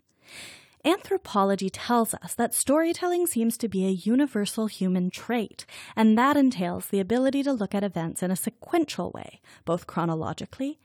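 Nothing technically wrong turns up in this short speech recording; there's no fault to point to anywhere in it.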